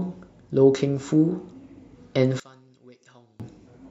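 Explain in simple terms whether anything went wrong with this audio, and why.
From 2.40 to 3.40 s the speech suddenly drops to a faint trace, then returns. The likely cause is one channel inverted: one stereo side flipped upside down, cancelling the other when combined. Unlike a dropout, a ghostly remnant remains rather than silence.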